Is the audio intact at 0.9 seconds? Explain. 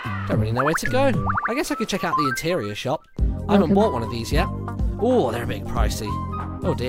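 Yes, though only just: a corrupt frame decoded plays from 0.84 to 0.87 s, ending about 30 ms before the point asked about. Bits inside a single compressed frame were flipped, and the decoder played it anyway, so misread gains and codes put energy at the wrong frequencies for that frame. It sounds like a brief chirp or blip peaking near about -10 dBFS. On a spectrogram it shows as a narrow vertical smear of misplaced energy; on the waveform, a short jagged burst.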